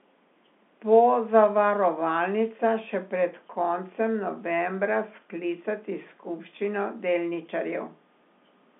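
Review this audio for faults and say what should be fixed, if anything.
Nothing stood out on listening that needs fixing, and the speech sits within the usual G.711 telephone band, with nothing above 3.8 kHz.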